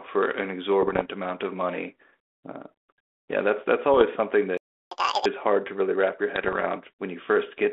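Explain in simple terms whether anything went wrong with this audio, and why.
Three kinds of fault turn up in this speech. Bit errors on an ADPCM link cause pops and rough, crackly bursts at 0.82 to 1.06 s, 3.94 to 4.02 s and 6.36 to 6.66 s. Flipped bits confuse the decoder's running estimate of the signal, so each error smears into a short burst with jumpy loudness.

A playback stall cuts the sound to silence from 4.57 to 4.91 s, a gap of about a third of a second. The player likely ran out of incoming data and had nothing to output until more arrived.

Catch-up at higher speed follows immediately, from 4.91 to 5.26 s. The player runs at double speed to win back the lost time, which pushes the pitch up by nearly an octave and gives a brief chipmunk effect before normal playback resumes.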